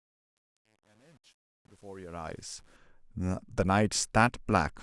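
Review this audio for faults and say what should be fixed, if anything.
The fade-in over the first 2.76 s has truncation distortion. The level rises, but its quietest stretch, 0 to 2.34 s, turns gritty, which fits a 9-bit path with no dither. Keep full word length and dither through the fade stage.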